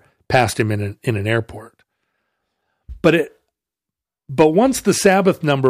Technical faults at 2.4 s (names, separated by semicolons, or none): none